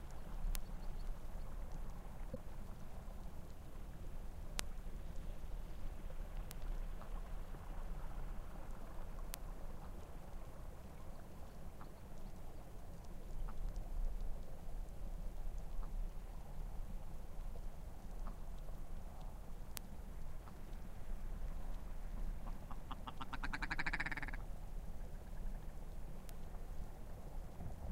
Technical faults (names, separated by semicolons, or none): bit error spike; corrupt frame decoded